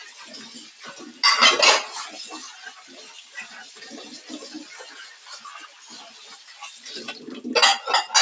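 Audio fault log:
Throughout: noise suppressor applied to music or sounds. A speech-oriented suppressor treats sustained, steady content as noise, so gain swings by around 15 dB. Onsets pass while held sound sinks, giving a pumping, thinned texture. The waveform envelope breathes, and the spectrogram shows sustained energy fading, capped at 8 kHz by the call microphone path.
2.77–2.92 s, 3.18–3.35 s, 5.67–5.88 s, 6.1–6.81 s: sound cut by the noise suppressor. Level dips by about 5 to 6 dB as the steady or decaying portions are mistaken for noise. Tails are clipped short, seen as abrupt waveform shrinkage and faded spectrogram bands over those spans.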